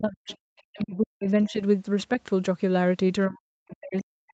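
Speech suppressed in double talk, 0.0 to 0.29 s: the speech dips sharply, by about 40 dB at its deepest, most likely because the echo canceller confused simultaneous talk with loudspeaker echo and turned everything down. Other side's voice leaking through, 0.28 to 0.37 s: a faint second voice, far below the speech, briefly slips in, likely residual loudspeaker echo the canceller failed to remove. Speech suppressed in double talk again from 0.68 to 1.6 s, with the same deep ducking of about 40 dB. Within it, the other side's voice leaks through from 0.79 to 0.85 s as another short, quiet scrap. Speech suppressed in double talk returns from 3.28 s to the end of the clip, attenuating the speech by up to about 40 dB. Throughout, nothing sounds above 8 kHz, which fits the band limit of the call's Opus codec.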